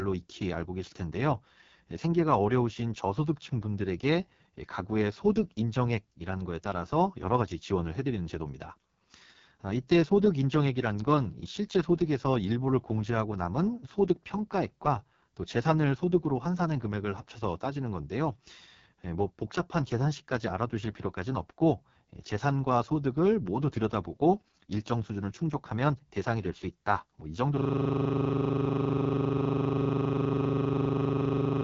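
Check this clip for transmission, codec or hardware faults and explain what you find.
Two faults are present: heavy codec damage throughout and a freeze near the end.

The AMR wideband (HD Voice) codec runs through the whole clip at what sounds like its lowest rate, around 6.6 kbit/s. Too few bits reach the pulse-driven vocal tract model, so the speech turns rough and raspy, with nothing above 7.4 kHz.

A system hang loop starts at 27.58 s and lasts to the end. The system froze while the sound hardware kept replaying one 40 ms stretch of its ring buffer, about a hundred times over, giving a steady 25 Hz machine-gun stutter.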